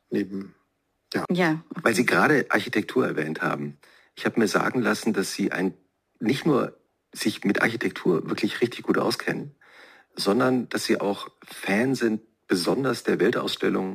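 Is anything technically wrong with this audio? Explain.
Yes. The audio has crude rate conversion, present from start to finish. The sample rate was changed without a proper filter, by simply repeating the nearest sample where new ones were needed. The repeat pattern fits a conversion from 44.1 kHz to 48 kHz. That pattern adds shifted, inharmonic copies of the sound itself, roughly 25 dB below it. The result is a gritty, inharmonic fizz. It rides along with loud and high-pitched passages.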